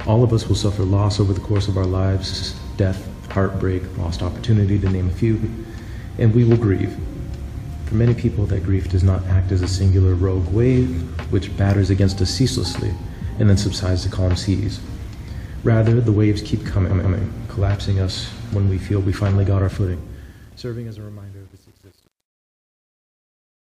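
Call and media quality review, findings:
Repeated frames, 2.30–2.49 s: stutter; a 92.9 ms block replays twice, adding 185.8 ms. Same fault at 5.41–5.51 s: one 92.9 ms block replays once. At 16.88–17.16 s: a 139.3 ms block replays twice, adding 278.6 ms. Unlike loss concealment, each repeat is an exact copy and extends the timeline. Probable component: encoder output or packetiser resending frames.

Truncation distortion on a fade, 19.59 s to end: the fade-out starting near 19.6 s turns gritty, worst from 20.45 s. This fits a roughly 9-bit undithered gain stage rounding the waveform to coarse steps. It differs from codec noise because the grit grows as the level drops. Probable component: fade or volume processing.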